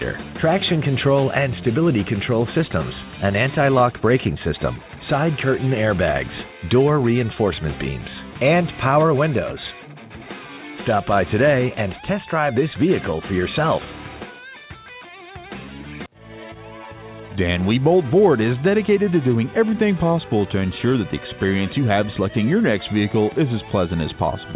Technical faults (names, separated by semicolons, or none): none